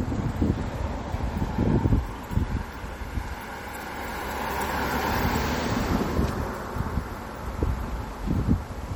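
From start to finish the audio has a watery, swirling quality from likely MP3 compression, consistent with a bitrate around 48 kbps. Weak frequency lines drop in and out frame by frame, giving metallic chirps and smeared attacks. Unlike dropouts, the damage never stops or leaves gaps.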